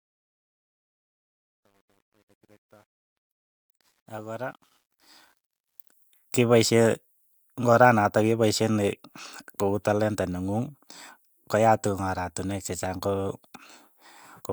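From 0.0 to 5.93 s, truncation distortion on the fade-in leaves the quiet start gritty, worst until 4.63 s. The waveform shows square steps consistent with 10-bit truncation without dither, and the spectrogram shows broadband hash.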